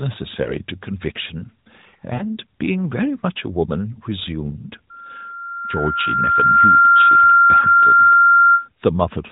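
A brief dip and warble at 0.44 to 0.56 s, then longer smeared fades at 2.14 to 2.23 s and 7.60 to 7.68 s, are lost AMR speech frames. Radio errors corrupted frames, and the decoder stretched the last good settings at falling gain. The dips suggest one, three and two missing 20 ms frames respectively.

From 4.90 s a single 1.4 kHz tone swells over about two seconds into a squeal roughly 15 dB above the speech. It holds until 8.69 s, overlapping the last dropout. This is loudspeaker feedback squeal: the microphone re-amplifies its own loudspeaker, and the loop gain exceeds one at that frequency.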